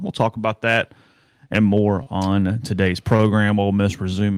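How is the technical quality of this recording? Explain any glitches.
Two brief glitches interrupt the speech, both a short stall from a late packet: at 2.03 to 2.08 s and at 3.16 to 3.29 s. A packet arrived late, the jitter buffer emptied, and the receiver held the preceding sound about 29 ms and 27 ms respectively. The result is an audibly prolonged sound with a slight buzz or dip, but no lost audio.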